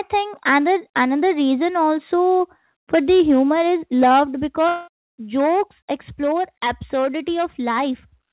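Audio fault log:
4.68–4.89 s, long network dropout: about 0.2 s of audio goes missing, and the last sound is stretched into a fading buzz across nearly the whole gap, with no true silence. This is likely because packets stopped arriving and the receiver concealed the loss until audio resumed.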